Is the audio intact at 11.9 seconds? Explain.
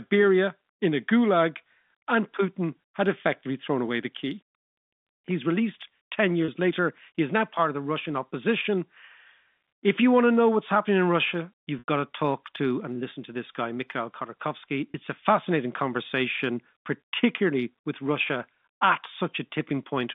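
No. From 11.79 to 11.88 s, just before "to talk to and", the speech holds on a brief buzzy tone that fades toward silence, then returns with a short cross-fade. This is packet loss with pitch repetition. About 90 ms of audio, consistent with a few lost packets, went missing. The receiver bridged the gap by repeating the last pitch period and fading it out over roughly 50 ms before normal speech resumed.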